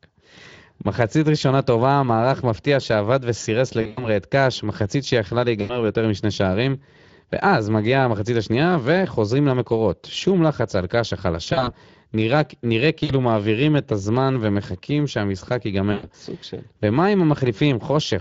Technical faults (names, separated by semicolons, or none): Speex codec; VoIP packet loss concealed by the speech codec